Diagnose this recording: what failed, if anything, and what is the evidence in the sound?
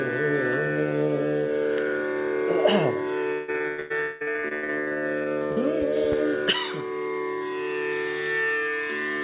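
At the network stage, packets kept going missing or arriving late between 3.32 and 5.58 s. Some two dozen holes were patched by stretching the preceding sound, the longest about 0.16 s. That repeated packet loss leaves the band-limited audio, with nothing above 4 kHz, choppy and robotic, with nearly half that stretch synthetic.

From 4.00 to 4.31 s, a long network dropout likely cut the incoming stream entirely. The receiver held the last sound as a smeared, fading buzz for about 0.2 s, never falling to silence, and roughly 14 ms of the original audio never returns when playback resumes.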